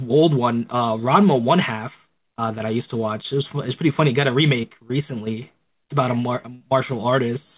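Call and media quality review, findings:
Short concealed packet loss at 4.62–4.65 s: brief smear in the speech where about 20 ms never arrived in time. The jitter buffer or decoder extended the preceding sound for roughly 12 ms, then cross-faded back into real audio. Narrowband call path, nothing above 4 kHz, consistent with G.711.

Burst of packet loss at 6.55–6.62 s: consecutive packets lost or late, about 60 ms of speech gone. Concealment held the last sound for roughly 52 ms while fading it to a buzz or hiss. Playback resumes further on, with the intervening content skipped.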